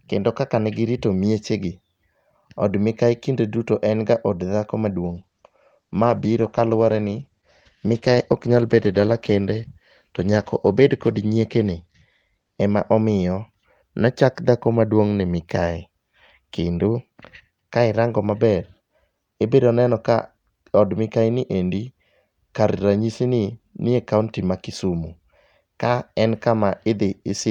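From 5.04 s to 13.55 s the speech goes through a call bitrate drop. The bandwidth estimate fell and the encoder cut its rate from 64 kbps to about 13 kbps, staying at the floor for roughly 5.4 s. Coarser coding makes the voice rough and watery, and the audio bandwidth narrows from 20 kHz to 12 kHz. Quality returns by "nochak dhako maduong'".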